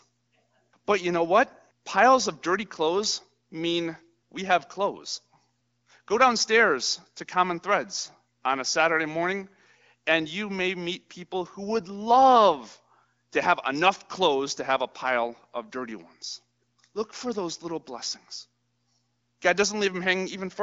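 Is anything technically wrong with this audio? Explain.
No, nothing technically wrong stood out on listening to this speech recording.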